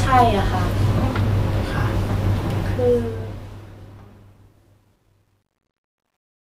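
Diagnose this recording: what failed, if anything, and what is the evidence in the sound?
Truncation distortion on a fade in the sample-format conversion: the fade-out starting around 2.6 s turns gritty from 2.58 s and is worst from 4.04 s, which fits undithered 11-bit steps.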